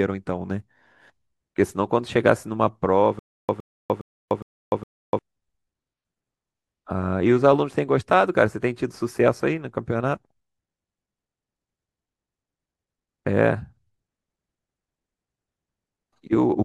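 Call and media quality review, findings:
Stutter with silent gaps, 3.19–5.19 s. The same 113 ms fragment of speech repeats 5 times, each followed by about 297 ms of digital silence, on a steady 411 ms cycle. Likely a stalled player or stream replaying its last buffer on each retry. Speech from that stretch is lost.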